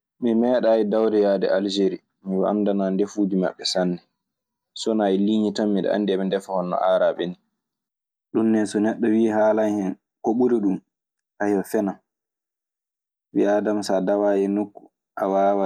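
No faults are audible anywhere in the recording; nothing in it calls for a fix.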